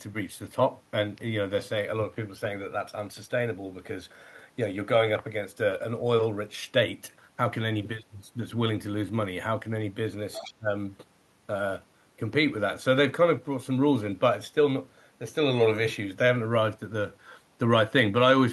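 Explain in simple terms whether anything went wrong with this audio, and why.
Two problems overlap around the 10-second mark of this speech.

From 10.33 to 10.54 s, the other side's voice leaking through can be heard: a faint second voice underneath. The likely cause is an echo canceller that failed to fully remove the far end's loudspeaker sound from the microphone.

From 10.4 to 10.68 s, there is speech suppressed in double talk. The main voice sharply drops away for brief moments, adding up to a fraction of a second. This likely happened because both sides spoke at once, and the canceller turned everything down.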